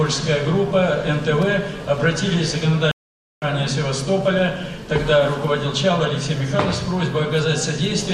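Stream reconnect at 2.91 to 3.47 s: the connection dropped, leaving 0.51 s of silence, then a fresh decoder resumed the audio roughly half a second further on.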